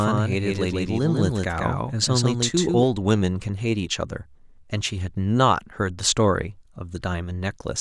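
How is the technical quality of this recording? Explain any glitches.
Quality takes a hit early on from a doubled audio track. From the very start to 2.84 s, a second full-band copy of the speech trails about 150 ms behind at roughly 5 dB down, likely captured twice through a slower path. It has no decay or room colour, just a dry slapback that cuts off abruptly at 2.84 s.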